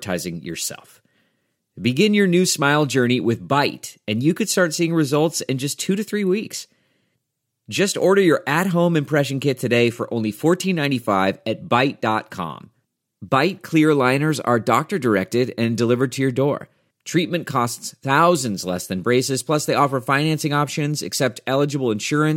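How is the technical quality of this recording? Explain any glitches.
Nothing goes wrong technically anywhere in the recording.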